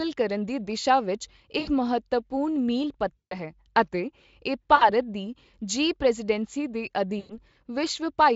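Speech with VoIP packet loss concealed by the speech codec at 1.59 to 1.71 s, 3.17 to 3.40 s, 4.75 to 4.90 s and 7.19 to 7.40 s. Each time the decoder stretches its last frame into a fading buzzy tone or coloured noise for 60 to 140 ms of missing audio. The Speex coding itself is clean.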